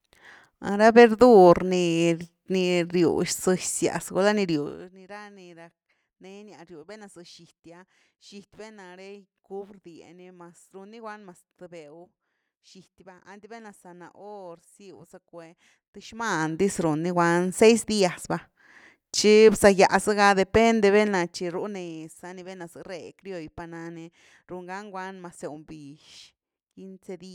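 No faults are audible anywhere in the speech.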